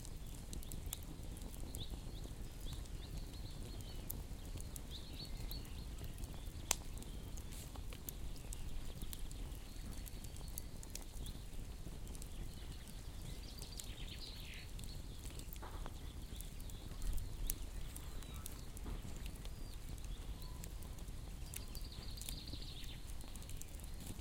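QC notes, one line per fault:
Throughout: clock drift between sender and receiver. The sending end's clock runs roughly 3% slow against ours, so the jitter buffer keeps draining and the receiver has to pad it out. You get small, unevenly spaced timing hiccups that never settle.
0.1 to 24.18 s: repeated timing corrections. The receiver keeps repeating short slivers to stay in step, all in the same direction, stretching things to about 97% speed. Altogether it adds roughly 0.7 s, heard as a slightly unsteady, dragging tempo across the sound.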